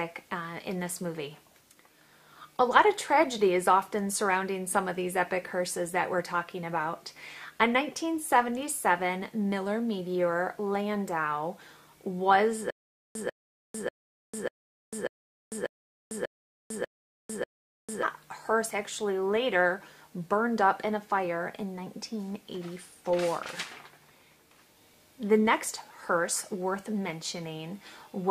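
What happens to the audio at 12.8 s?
At 12.8 s you're right inside a stutter with silent gaps, running from 12.70 to 18.03 s. A short burst of about 144 ms plays, then roughly 448 ms of dead digital silence, and the cycle repeats every 592 ms or so, nine times in all. That steady loop-and-drop is most likely a stalled player or stream retrying and replaying its last fragment before running dry, so the audio that belonged in that stretch never plays.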